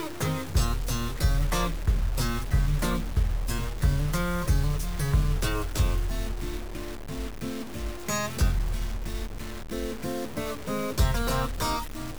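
From start to finish, the audio carries a grainy, gritty distortion that rises and falls with the sound itself. Quieter passages get rougher, and the softest moments either drop out or sputter between two coarse levels. The error sits only around 20 dB below the signal. This points to low bit depth without dither. The likely cause is truncation to very few bits, which fits a 5-bit signal. Because no dither was used, the rounding error tracks the sound instead of becoming steady hiss.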